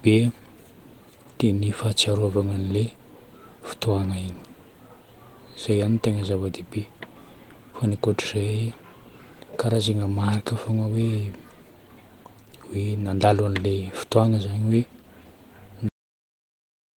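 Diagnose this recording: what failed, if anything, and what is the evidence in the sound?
Throughout, the speech has a hoarse, grainy texture with a slightly robotic edge, and the damage is plainly audible even though the band stays open to about 20.2 kHz. This is Opus voice compression at the codec stage, running in hybrid mode: a linear-prediction coder handles the lower band and a transform layer covers the top. The excitation is being quantised coarsely, which fits a bitrate around 16 kb/s, and that coarse coding produces the rasp.

At 15.89 s the speech stops mid-sound and drops straight to digital silence, with no decay, and stays silent for the final second. This is a cut-off end at the storage or buffering stage. The last buffers of audio were never written to the file or played out, so the recording simply ends where the data ran out instead of where the sound finished.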